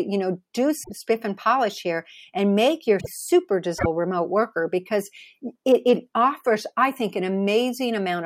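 At 0.82 s (after "know do"), 2.99 s (after "polish here and make") and 3.78 s (before "remote worker because it"), the speech jumps ahead with a roughly 80 ms chirp, noise burst or short hole, likely a broken MP3 bit reservoir after dropped frames, spanning about three 26.1 ms frames.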